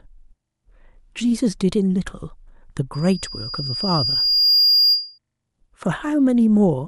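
Loudspeaker feedback squeal runs from 2.93 to 5.18 s: a microphone is picking up its own loudspeaker, and at 4.8 kHz the loop gain passes one, so a single tone swells over about a second and a half until it sits a few decibels above the speech.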